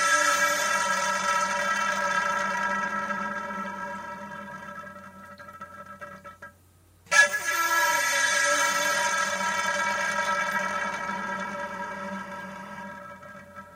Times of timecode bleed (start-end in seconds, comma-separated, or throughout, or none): 9.45-12.83